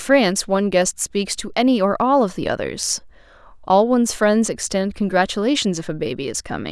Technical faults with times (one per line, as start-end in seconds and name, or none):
none